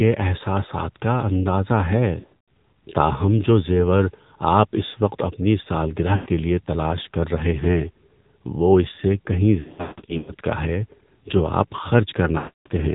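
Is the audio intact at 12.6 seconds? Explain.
No. From 12.38 to 12.68 s, lost AMR speech frames failed their checks. The decoder reused the last settings with falling gain, so the sound smears and fades toward silence. It all passes through the AMR narrowband mobile codec. Nothing above 4 kHz survives, and the buzzy, synthetic tone fits a low bitrate near 7.4 kbps.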